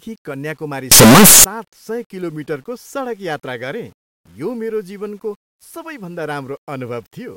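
A speech clip in which, from 0.92 to 1.44 s, the sound bursts into very loud, harsh distortion, likely from signed and unsigned mixed up in the 8-bit samples. Unlike clipping, the quiet moments become as loud as the rest, well beyond the faint grainy hiss of 8-bit audio.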